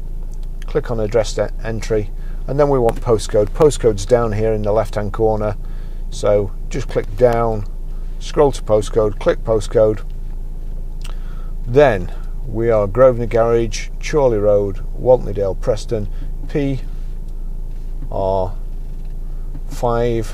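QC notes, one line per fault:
2.75–3.76 s, CD scratch ticks: a blemish defeats error correction once per disc turn, so the player patches the lost samples, heard as eight brief ticks, the longest about 1.5 ms.
6.75–7.33 s, CD scratch ticks: a blemish recurs on successive turns, giving five ticks, the longest about 4 ms.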